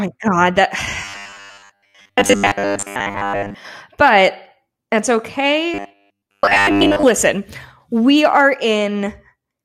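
From 1.05 to 3.55 s and 5.74 to 7.03 s, the speech turns to a rigid metallic buzz at 100 Hz. This robotic sound likely comes from repeating 10 ms buffers, replacing most of the audio.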